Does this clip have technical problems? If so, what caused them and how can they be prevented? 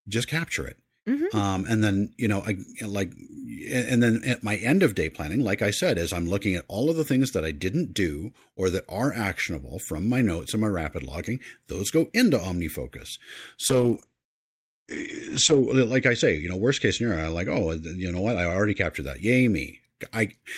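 Yes. From 13.71 to 18.97 s, a call bitrate drop leaves the speech rough and muffled. Its bandwidth shrinks from 20 kHz to 8 kHz, with the worst stretch lasting 1.93 s, which fits an encoder squeezed from about 48 to 10 kbps. Unlike packet loss, nothing drops out or repeats; the coding simply coarsens, then recovers. A higher minimum encoder bitrate and steadier uplink bandwidth would prevent it.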